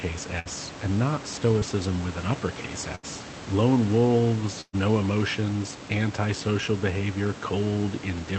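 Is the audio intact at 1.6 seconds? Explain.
No. Short concealed packet loss from 1.59 to 1.63 s, between "and not" and "with an uppercase": about 20 ms was rebuilt by extending the preceding sound, showing as a brief smeared, flattened patch in the spectrogram.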